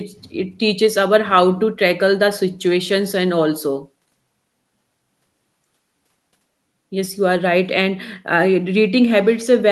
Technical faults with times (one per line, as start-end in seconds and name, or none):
none